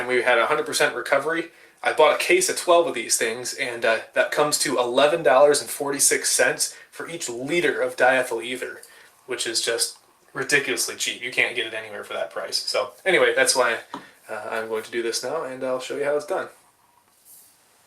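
From 11.40 to 11.42 s, hard clipping: the sound overdrove a stage by about 2 dB, flattening peaks into crackle, seen as squared waveform tops and a brief vertical spectrogram smear.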